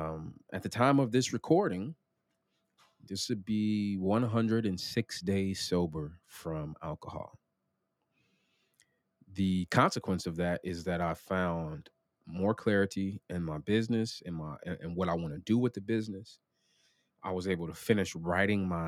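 Nothing goes wrong anywhere in this speech recording, so there's no technical fault to point out along the way.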